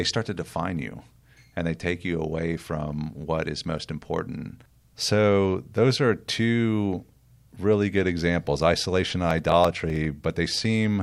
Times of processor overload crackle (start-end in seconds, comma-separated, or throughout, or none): 9.31-10.05